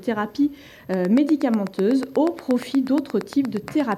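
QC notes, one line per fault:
0.94–3.93 s, train of clicks: a regular ticking at about 8.4 clicks per second, some thirty near-identical pulses standing roughly 10 dB above the sound and audible in pauses too, likely from interference by nearby equipment or a faulty connection or power supply.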